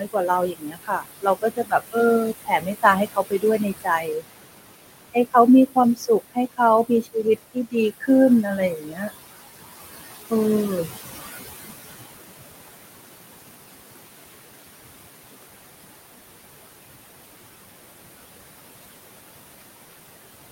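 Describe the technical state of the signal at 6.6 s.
Speech cut by the noise suppressor affects 5.67 to 8.09 s, which includes 6.6 s. The suppressor mistook parts of the speech for noise and pulled them down with the background, by up to about 19 dB, across about half a second in total, so those stretches sound swallowed and faint.

Noise suppressor artifacts run through the whole clip, including this moment. The suppressor lowers the bands it judges to be steady noise, frame by frame, by about 20 dB, so the room noise, which sits about 11 dB below the speech, sinks in the gaps and rises back under the speech.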